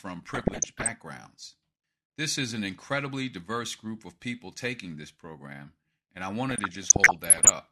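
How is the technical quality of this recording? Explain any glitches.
The speech is marred by two bursts of DAB burbling, at 0.34 to 0.90 s and 6.49 to 7.50 s. Weak reception let bit errors, around 1 percent in the first burst and a little less in the second, slip past error correction into the MP2 data, corrupting samples and scale factors frame after frame. Individual sub-bands jump in level, and short blips of noise pop up in single sub-bands over the speech for each stretch.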